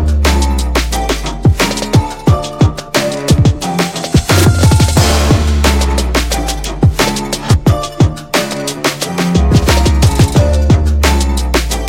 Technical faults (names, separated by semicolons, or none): periodic clock jitter